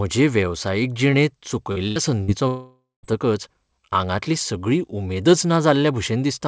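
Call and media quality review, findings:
Short concealed packet loss at 1.72–1.79 s, right after "वेवसायीक जिणेंत", and again at 2.24–2.31 s. Each is a quick smear or wobble where about 40 ms never reached the decoder in time. Receiver PLC continued the preceding sound over the hole, then crossfaded back to real audio.

Burst of packet loss at 1.88–1.99 s, still close after "वेवसायीक जिणेंत". About 80 ms is gone back to back. Concealment holds the last sound as a buzz or hiss, turning it down as it goes, and then audio resumes further along with that chunk missing. This is receive side, where the jitter buffer had nothing to play and PLC bridged it.

Long network dropout at 2.48–3.06 s. There's roughly 0.55 s of held, fading fill, and the last ~0.18 s is close to silent. Audio then picks up later with that stretch lost. The cause is likely a stall in the incoming stream long enough that concealment decayed to nothing. 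The fill stays inside the same band as the rest, nothing above 8 kHz, which fits a G.722 path at 64 kbps.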